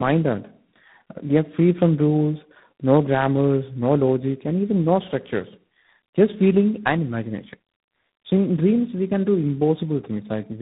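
From the first second to the end, the speech shows tandem speech coding: it passed through a G.729A stage, then G.711 mu-law, then G.726 at 24 kbit/s, with two true speech coders in the chain. Nothing survives above 3.8 kHz, so the sound is muffled, but unlike simple band-limiting it is also rough and warbly, because the second coder re-encodes the first one's errors. That compounded grit sets it apart from a single low-rate codec.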